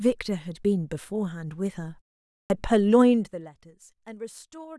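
At 2.43 s there's a clipped start after a pause: the output dozed off during the half-second gap, so roughly 70 ms of the next speech onset gets chopped off.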